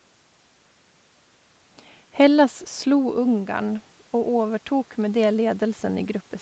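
From 2.87 s to 6.12 s there is automatic gain rising. The input drops by about 10 dB when the talker moves back around 3 s, and the gain control slowly adds about 7 dB. Speech and room noise swell together, visible as a gradually widening waveform envelope and a brightening noise floor on the spectrogram.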